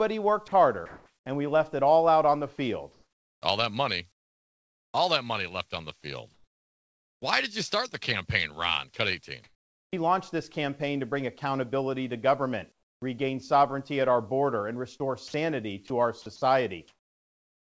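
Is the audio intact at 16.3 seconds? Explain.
No. From 15.28 s to the end at 17.79 s the sound is chopped by the voice detector, and 16.3 s falls inside that stretch. The sender's voice activity detection likely toggled between transmitting and pausing several times, and during the pauses quiet speech and word edges were replaced with synthetic comfort noise, around 1.07 s of it in total. The speech turns choppy, all within the call path's 8 kHz bandwidth.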